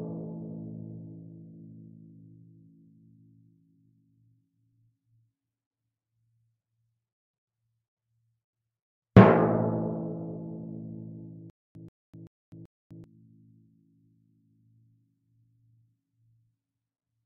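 A stalled stream likely replayed its last buffer on each retry, causing stutter with silent gaps from 11.50 to 13.04 s: a 134 ms burst repeats four times, separated by 251 ms of digital silence.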